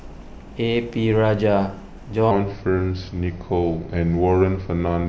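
From 2.31 s to the end, the speech abruptly drops deeper and drags, pitched roughly three semitones low and running at 0.836 times normal speed. This section at the wrong speed likely comes from playback or editing against a mismatched clock, slowing timing and pitch together.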